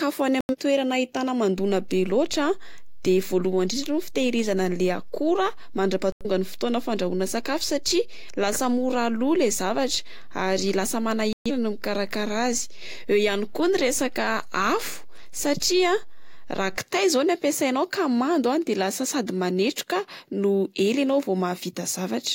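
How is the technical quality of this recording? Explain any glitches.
The speech has two technical faults.

Digital broadcast dropouts mute the sound from 0.41 to 0.55 s, 6.12 to 6.26 s, and 11.33 to 11.51 s. The receiver discards bad frames and goes silent.

A DC step shifts the waveform's zero line at 1.58 s and releases at 16.78 s. Each shift is heard as a low thump while the speech continues.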